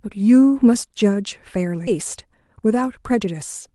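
At 1.87 to 1.89 s there is a skip ahead. Roughly 0.7 s of audio never plays, and the material on either side is butted together with no silence or fill between them, so the sound lurches forward mid-flow. Audio was dropped while later audio was already waiting, cutting the delay by about the same amount. Unlike a dropout, nothing is muted or concealed. The gap is simply absent, and the join sounds like an abrupt edit.

From 2.26 s to 3.68 s a jitter buffer speed-up takes over. The buffer was holding more audio than its target, so it trimmed many tiny pitch-period-length slices in succession, about 70 ms in total, making playback run at about 105% speed. The speech sounds slightly rushed, but its pitch stays put, which separates it from a sample-rate or clock mismatch, where speed and pitch rise together. The call codec's coding noise and high-frequency limit near 12 kHz are present throughout, consistent with Opus at around 32 kbps.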